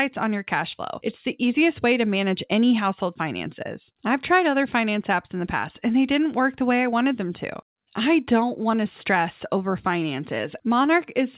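Nothing stood out on listening; the speech carries the narrow, telephone-like band of a call codec, with nothing above about 4 kHz, and no event in it drew attention.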